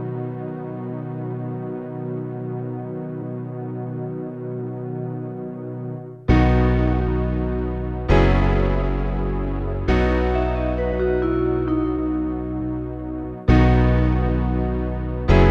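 Periodic clock jitter runs through the whole clip: the converter's sample clock is being wobbled at around 1 kHz, so every component of the sound carries sidebands spaced that far above and below it, giving a rough, metallic edge that is strongest on high content and disappears in silence.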